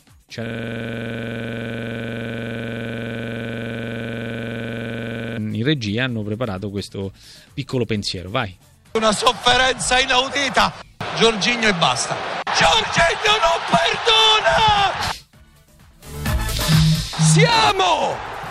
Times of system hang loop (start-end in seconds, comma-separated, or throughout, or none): 0.47-5.38